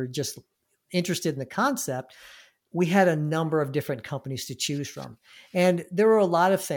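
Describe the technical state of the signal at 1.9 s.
At 1.9 s the speech signal is intact, with no fault to be heard at that moment.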